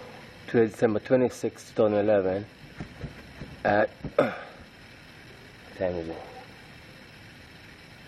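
No technical faults occur at any point in this audio.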